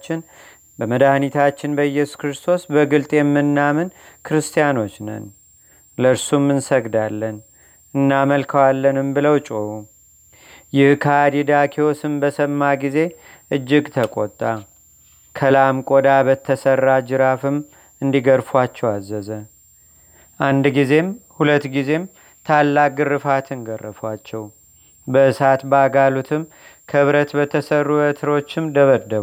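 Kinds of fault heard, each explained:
Switching supply whistle: a faint high whistle sits under the speech for the whole clip, wandering between about 7.23 and 7.47 kHz, roughly 35 dB below the voice. That's what you get when a switching power supply drops into an audible burst mode or beats against another supply. As the load shifts, its frequency moves, which is why the pitch drifts around instead of holding still.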